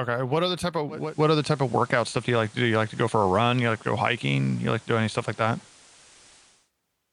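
At 0.88 s, after "other type", digital radio blending to analogue begins: the digital stream fails and a 382 ms cross-fade brings in FM until 6.72 s. Level shifts about 4 dB, and hiss appears roughly 30 dB below the signal, unlike a codec bandwidth drop.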